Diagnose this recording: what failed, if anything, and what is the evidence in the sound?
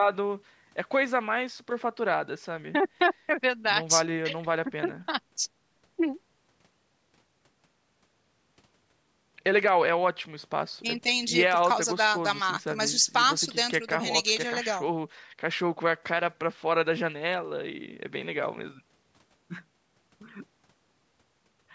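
No fault found here.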